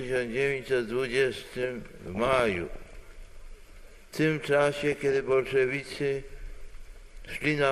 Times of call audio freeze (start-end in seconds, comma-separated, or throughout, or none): none